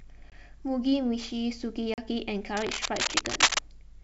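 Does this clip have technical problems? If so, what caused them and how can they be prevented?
Yes. There are two kinds of fault in this speech clip.

Packet loss on an ADPCM call appears twice: a 20 ms hard-edged gap from 0.30 to 0.32 s, about one packet's worth, and a 40 ms gap from 1.94 to 1.99 s, about two packets. The missing audio was filled with silence. Because ADPCM codes each sample relative to the last, the receiver's predictor and step size no longer matched the sender's, so the speech resumes slightly distorted before settling. Prevention: use jitter buffering and packet loss concealment that also resets or resyncs the ADPCM decoder state.

Cable scratch noise runs from 2.57 to 3.59 s. It is a dense, irregular rustling burst roughly 5 dB above the speech. The likely cause is a worn cable, connector or fader being moved, so that its contact resistance fluctuated rapidly during that second. 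The G.722 wideband coding underneath is clean, with faint or no coding damage, consistent with its 64 kbit/s mode. Prevention: replace or clean the faulty connector and secure cables against movement during recording.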